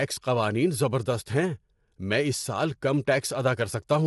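Throughout the speech, the signal has likely been through low-delay AAC compression at a low bitrate, around 32 kbps. Its short frames resolve pitch harmonics poorly, so the voice sounds plainly rough and grainy, with noise filling between harmonics and nothing above 11.6 kHz.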